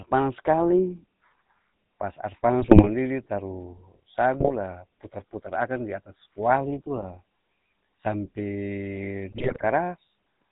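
A speech recording carried over a GSM full-rate codec, which sounds like the 13 kbps scheme: a vocal-tract model excited by sparse regular pulses, with nothing above 4 kHz, so the whole clip has a plainly audible buzzy, gravelly roughness and a muffled top. GSM bit errors corrupt the decoded filter, pitch and gain values at 2.61–2.9 s, 4.40–4.54 s, 6.96–7.05 s and 9.32–9.65 s, twisting the spectrum and level frame by frame into squawks, pops and gargling bursts.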